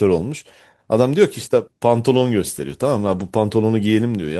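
At 2.15–2.17 s and again at 3.07–3.21 s the speech turns briefly rough and noisy: a lost packet rebuilt from error correction. No gap opens, because a low-bitrate copy fills in. The second stretch, 80 ms long, suggests about four packets. On a spectrogram, the harmonics blur there.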